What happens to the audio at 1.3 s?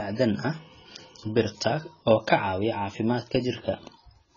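At 1.3 s, as throughout, the speech is dulled and warbly, likely from heavy AAC compression at a bitrate near 16 kbps; a spectrogram shows nothing above 7 kHz.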